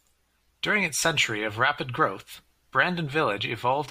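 Speech, with nothing technically wrong with it.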